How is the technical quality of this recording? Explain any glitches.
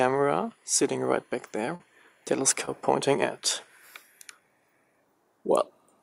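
Two brief dropouts mar the recording, both short concealed packet loss. The first runs from 1.75 to 1.81 s, with about 40 ms missing. The second runs from 2.65 to 2.69 s, with about 20 ms missing. In each, a slice of audio arrived too late to decode. The receiver covered the hole by extending the preceding sound, then blended back into the real signal. Each gap is heard as a quick smear or wobble.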